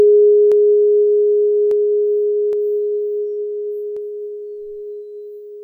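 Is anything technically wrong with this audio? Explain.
Yes. Dropped samples at 0.52, 1.71, 2.53 and 3.97 s: each is a single sharp click in the music. The likely cause is that a fraction of a millisecond went missing from the stream, so the waveform jumps abruptly to a later value.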